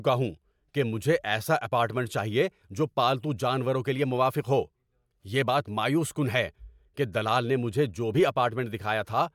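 No technical faults are audible.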